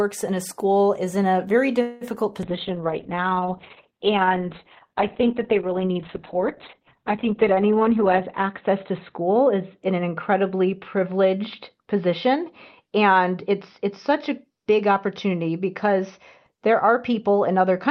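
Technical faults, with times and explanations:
1.81 to 2.04 s, call audio freeze: Packets were likely held up in transit, leaving the jitter buffer empty, so the receiver stretched the last sound for about 196 ms as a fading buzz or hiss. When they arrived, the speech carried on where it stopped, with nothing lost.
2.47 to 17.9 s, call bitrate drop: The bandwidth estimate fell, and the encoder went from 32 kbps down to 7 kbps, staying at its lowest for about 5.5 s. The audio band shrank from 20 kHz to 4 kHz, making the speech muffled, coarse and watery.
7.90 to 10.81 s, jitter buffer speed-up: The buffer had built up more delay than its target, so the receiver repeatedly cut short pitch-period slices, about a fifth of a second in total. The speech runs roughly 6% faster at unchanged pitch and sounds hurried.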